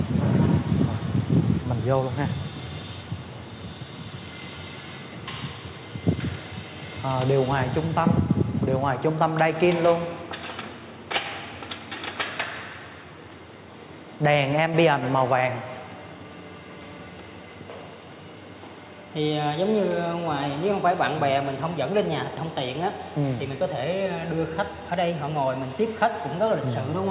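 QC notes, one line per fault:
No faults found; the audio runs over a G.711 mu-law call path at 64 kbps with nothing above 4 kHz, as that codec gives.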